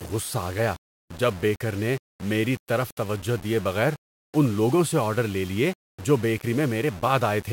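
From start to finish the speech carries a grainy, buzzing distortion that shifts with each syllable, and quiet tails break up or sputter. This is low bit depth without dither: the audio was likely rounded to about 6 bits, leaving error roughly 20 dB below the signal.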